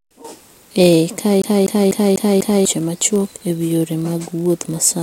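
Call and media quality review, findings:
Block size mismatch (padded), whole clip: steady buzz at 43.1 Hz, which fits a 1024-sample read block that is slightly underfilled by the writer. The gap is zero-filled each block, so playback runs about 0.999x, timbre unchanged. Waveform: tiny flat notch every block. Spectrogram: faint vertical lines, harmonic comb at 43.1 Hz spacing.

CD stuck on one turn, 1.42 to 2.65 s, just before "machuok e wi yore": fast, even stutter. The same 247.35 ms segment plays 5 times, with a short mute at each jump. The playback source, likely a scratched disc, throws the laser back one track per turn. Waveform: identical repeating envelope with brief dropouts. Spectrogram: copy-pasted blocks with thin vertical gaps.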